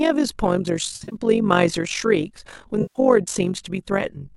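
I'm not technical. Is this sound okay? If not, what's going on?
No. The whole clip has overlap-add ripple: the level pulses about fifty times a second, which gives the speech a fast, buzzy flutter, like a robotic tremolo. It happens because the sound was chopped into short overlapping slices and stitched back together with uneven gain.

There's also AAC frame loss with concealment, twice. Around 0.96 to 1.15 s, short chunks keep dropping out, the longest about 40 ms, and at 2.82 to 2.99 s about 130 ms goes missing. In both spots the decoder patches the gaps with guessed sound, so you hear a smeared, noisy blur. It's likely the low-delay AAC used for video calls, working in roughly 10 ms slices.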